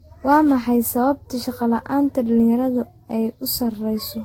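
Throughout the speech the sound is swirly, hollow and smeared, with consonant attacks blurred, more degraded than a single encode near 63 kbit/s would leave. The likely cause is generation loss: the audio seems to have passed through a lossy codec, fitting Vorbis, around seven times, each pass requantising on a shifted frame grid so noise and spectral holes accumulate. A spectrogram would show a hard ceiling at 16.6 kHz and patchy, flickering gaps in the upper bands.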